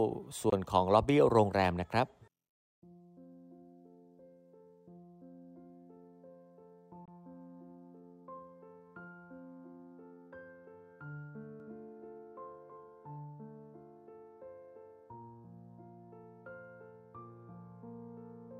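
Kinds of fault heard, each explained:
Bluetooth dropout: Two brief silences of about 21 ms, at 0.50 s and 7.05 s, likely from a lost wireless packet, then sound resumes as if it had played on.
Doubled audio track: From 11.6 to 13.16 s, a second copy follows about 0.3 s behind, roughly 5 dB quieter, with no room colour. It is likely from a duplicated capture path.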